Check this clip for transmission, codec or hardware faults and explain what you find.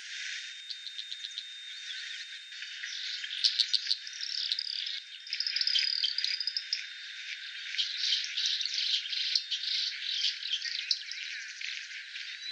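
One fault is present: a feedback whistle running from 0.0 s to 10.02 s. A thin, steady tone at 3.7 kHz sits behind the sound, roughly 15 dB below it, swelling and fading slowly in level and then stopping. The likely cause is a loudspeaker-to-microphone loop held right at the edge of feedback, so that single high frequency keeps recirculating and sustaining itself without growing into a full howl.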